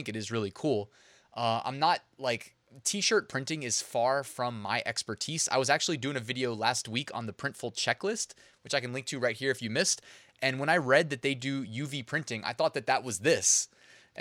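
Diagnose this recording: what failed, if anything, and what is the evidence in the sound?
Nothing in the signal chain shows a failure: the speech recording holds steady and continuous, with no breaks, level jumps or added noise at any point along its length.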